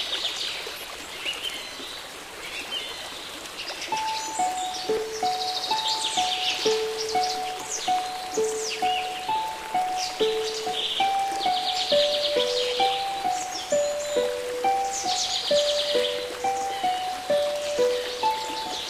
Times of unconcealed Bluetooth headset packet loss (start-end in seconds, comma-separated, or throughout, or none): none